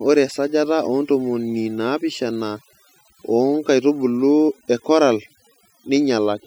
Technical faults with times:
0.00-6.46 overdone noise removal

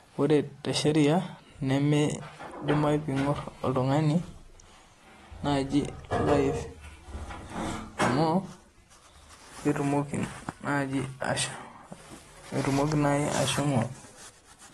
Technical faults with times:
0.00-14.73 AAC compression

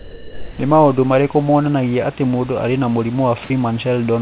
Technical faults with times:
0.00-0.59 sound dropped by the voice detector
3.44-3.50 sound dropped by the voice detector

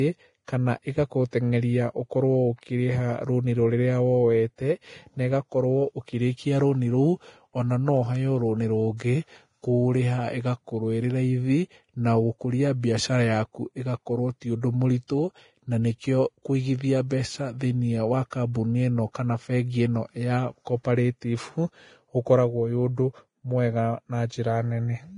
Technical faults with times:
0.00-25.18 Vorbis compression
1.31-1.33 pre-echo
15.07-15.10 pre-echo

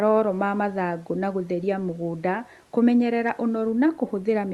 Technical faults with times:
none

